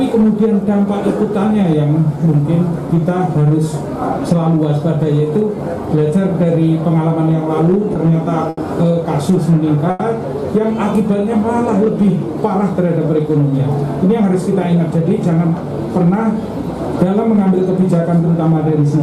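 Short stalls from late packets come at 7.93, 8.49 and 9.90 s. The jitter buffer ran dry. The sound holds for 20, 80 and 90 ms, then resumes intact. From 14.20 to 15.48 s, a jitter buffer speed-up runs the audio about 6 percent fast at unchanged pitch. It trims roughly a tenth of a second and sounds hurried.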